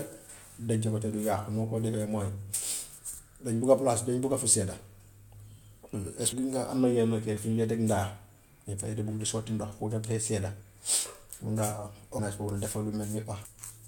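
At 6.31, 12.18 and 13.44 s the speech lurches forward as compressed frames are skipped: whole blocks of the encoded stream never reach the output, so the audio resumes further on. The jumps lose about a fifth of a second, about a tenth, and about half a second, which fits roughly ten, five and twenty frames of 21.3 ms. Unlike a dropout there is no gap of silence.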